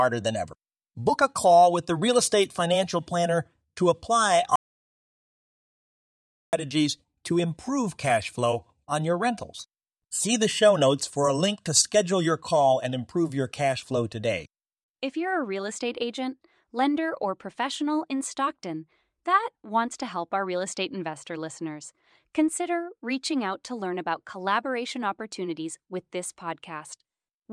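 A speech recording with one audio dropout to silence, running from 4.56 s to 6.53 s. The speech breaks off mid-flow and returns just as abruptly, and the roughly 1.97 s between is silent: no room tone, no hiss, nothing. The input was most likely lost while the recorder kept writing, through a disconnected device, a failed link or a stray mute, so whatever was spoken in that stretch is gone.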